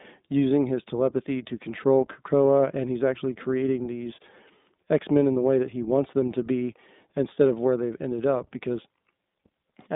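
iLBC codec damage runs throughout: each 20 ms frame is coded independently, leaving the speech rough and synthetic, confined to about 200 Hz–3.7 kHz, which fits iLBC's 15.2 kbps mode.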